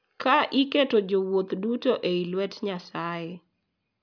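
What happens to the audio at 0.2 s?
Nothing goes wrong at 0.2 s; the speech plays through that moment intact.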